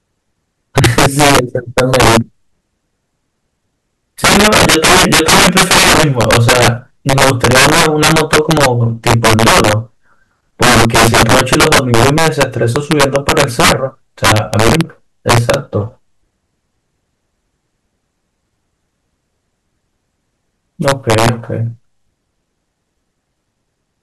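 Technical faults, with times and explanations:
Throughout, integer overflow: the louder syllables of the speech break into harsh, violent cracks, far sharper and more explosive than ordinary clipping distortion. The signal is driven about 12 dB past the top of the integer range, and instead of being held at the limit, each peak that crosses it wraps around to the opposite extreme. Only a small share of samples, around 4 percent, go over, but every one jumps across the full range.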